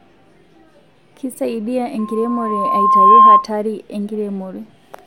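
At 1.98 s a loudspeaker feedback squeal begins in the speech. A microphone is picking up the loudspeaker it feeds, and at 1.1 kHz the loop gain rises above one. That single tone reinforces itself on every pass. It swells over roughly a second into a steady, piercing squeal. At its peak it sits about 15 dB above the speech and dominates it. It stops at 3.47 s.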